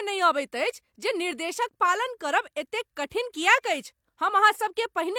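Listening to the speech recording, nothing stood out as a technical problem at any point.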